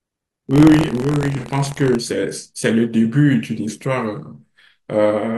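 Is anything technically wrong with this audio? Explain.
Yes, there are two faults, both in the first couple of seconds of this speech.

From 0 to 1.97 s there's buffer tearing: the writer and the hardware read position have slipped, so each buffer carries a small slice of audio roughly a tenth of a second stale. That gives a gritty 43.1 Hz buzz riding on the signal, which fits a 1024-sample buffer.

From 1.37 to 1.44 s there's AAC frame loss with concealment. About 42.7 ms went missing, consistent with a single lost frame, and the decoder patched it from the last good spectrum, so you hear a brief smeared, noisy blur.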